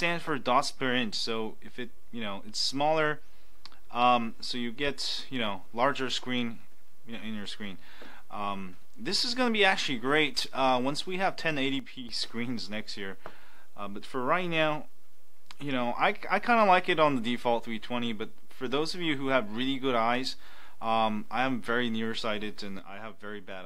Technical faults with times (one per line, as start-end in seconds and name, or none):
11.79-12.09 one channel drops out
22.79-23.66 one channel drops out